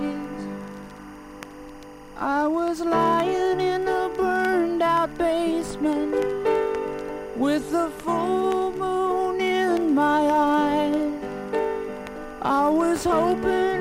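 Linear timecode from an adjacent track or cable bleeds into the audio throughout, adding a faint chirping warble near 1 and 2 kHz, roughly 30 dB below the sound, with a rhythm that fits 23.976 fps code.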